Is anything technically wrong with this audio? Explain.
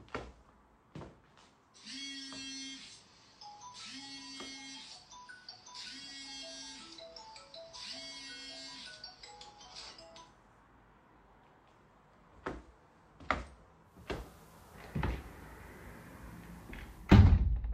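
Yes. From 13.82 to 17.30 s there's digital radio blending to analogue: the receiver lost the digital stream and cross-faded over about 357 ms to the station's FM signal. The level shifts by about 4 dB and hiss rises to roughly 35 dB below the sound.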